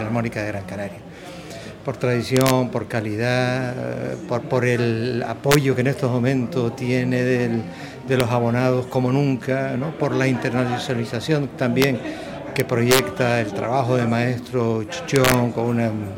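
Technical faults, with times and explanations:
2.37–2.50 s, 5.52–5.55 s, 8.20 s, 11.82 s, 12.60–12.99 s, 15.16–15.34 s: integer overflow. Peaks reaching or exceeding full scale by about 0 to 4 dB wrap to the opposite sign instead of limiting, producing violent cracks far harsher than clipping. The worst and longest is at 12.60 s.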